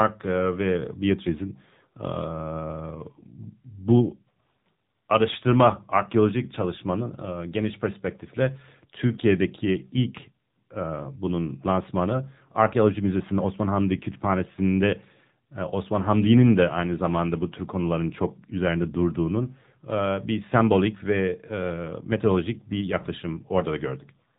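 From start to finish, the speech has AMR narrowband mobile codec damage: nothing above about 3.8 kHz, and a buzzy, synthetic edge that suggests a low mode, around 7.4 kbps.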